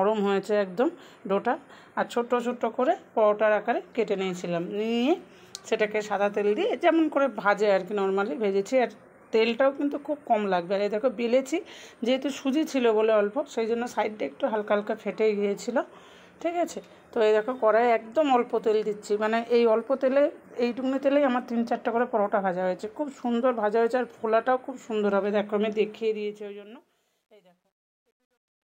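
From 25.91 s to the end, truncation distortion sits on the fade-out, which begins around 26 s. Resolution fits about 11 bits with no dither, so from 26.92 s to 28.71 s the tail turns gritty rather than dying away smoothly.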